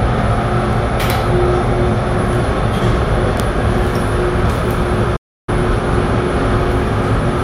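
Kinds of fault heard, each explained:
Playback stall: at 5.16 s the everyday sound cuts abruptly to silence for 314 ms, resuming at 5.49 s. The player likely ran short of buffered data or had its output thread held up, so nothing reached the output until it recovered.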